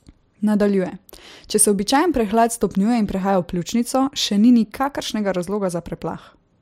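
A speech recording with a single bit error spike at 5.56 s, just after "pljučnico še ni nikakršnega". It is heard as one sharp, broadband tick with no relation to the surrounding sound. The disturbance occupies a single sample: one bit in that sample's value was flipped in memory or on a digital link, throwing the waveform out by a power of two for that instant before it returns to the correct level on the next sample.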